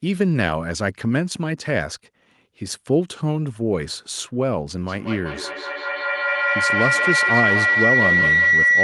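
A closed acoustic loop has formed in this speech recording: sound from a loudspeaker is reaching a microphone on the same call and being sent back out louder on each pass. From 4.87 s to the end, this feedback howl builds into a tone of around 2 kHz, the frequency the loop reinforces most, pulsing roughly every fifth of a second as the signal circulates. At its peak it sits about 4 dB above the speech.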